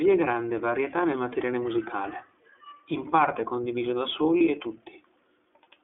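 Throughout the speech, iLBC codec damage is plainly audible. The band is confined to roughly 300 Hz to 3.5 kHz, and the voice has a rough, synthetic edge from frame-by-frame excitation coding. This fits the 13.33 kbps mode with 30 ms frames.

From 4.37 to 4.42 s, just after "in parte condiviso da", lost iLBC frames cause a short concealment gap. The decoder repeats the last pitch cycle blended with noise, heard as a brief held, buzzy vowel, consistent with a single 30 ms frame. Speech recovers immediately afterwards.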